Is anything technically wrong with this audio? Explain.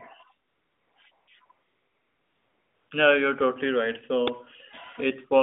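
Yes, there are two kinds of fault in this speech clip, which comes over an AMR narrowband mobile link limited to about 200 Hz to 3.6 kHz.

AMR comfort noise fills the pauses at 0.48–0.96 s, 1.12–1.28 s, 1.46–1.50 s and 1.52–2.90 s. The phone judged the talker silent and stopped sending speech frames. The receiver then synthesised a smooth, steady hiss from a rough description of the background's level and spectrum. On a spectrogram these stretches are flat, featureless noise bands with abrupt edges. The waveform shows an even low-level fill that switches in and out.

An uninitialised buffer causes a single loud crack at 4.28 s, just after "you're totally right". A block was played before any audio had been written to it, so leftover memory came out as sound. Its roughly 2.7 ms length fits a 128-sample block. It shows as a sharp spike in the waveform and a thin broadband vertical line on a spectrogram.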